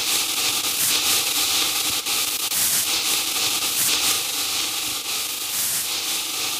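From 4.12 s to the end, a channel delay (doubling) holds one channel 40 ms late before the mono sum, so every sound arrives twice, like an equal-level slap echo.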